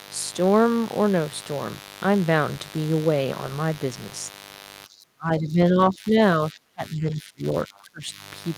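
Spiky interference from a 50 Hz mains supply leaks into the signal path throughout, adding a steady, raspy mains buzz only about 20 dB below the speech. From 4.86 to 6.15 s, 6.52 to 7.45 s and 7.66 to 8.2 s, the speech is repeatedly turned down by roughly 20 to 30 dB, likely speech suppressed in double talk, so the voice dips and breaks up.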